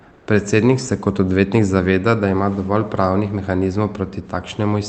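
From 0.13 to 0.27 s, the background briefly turns smooth and featureless, about 1 dB quieter, before the real ambience returns. This is comfort noise in place of the background, likely from discontinuous transmission such as Opus DTX, with synthetic noise covering that 140 ms gap.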